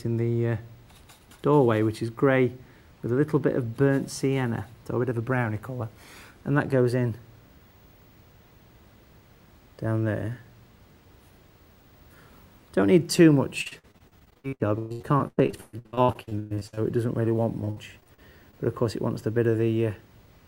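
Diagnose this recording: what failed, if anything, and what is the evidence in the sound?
Choppy, robotic sound runs from 13.61 to 16.79 s, then more briefly from 17.65 to 18.55 s. This is repeated packet loss at the network stage. Dozens of gaps, the longest 122 ms, are each patched by stretching the preceding sound, concealing nearly half of the first stretch.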